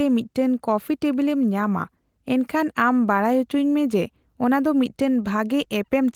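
No technical faults can be heard anywhere in the recording.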